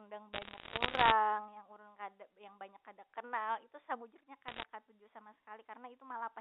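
Bit errors on a digital phone line, flipping under one percent of bits, corrupt single samples, scattering sharp crackling ticks over the speech from 0.33 to 1.12 s and 4.48 to 4.64 s.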